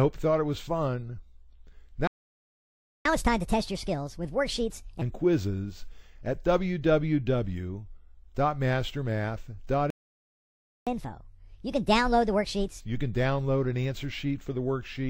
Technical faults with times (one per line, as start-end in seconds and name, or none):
2.07-3.05 playback stall
3.05-5.02 catch-up at higher speed
9.90-10.87 playback stall
10.87-12.80 catch-up at higher speed